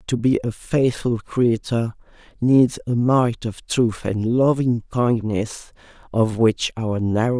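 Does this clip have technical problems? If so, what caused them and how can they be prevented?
No, nothing in this speech recording points to a technical fault, so there is no cause to trace and nothing to prevent.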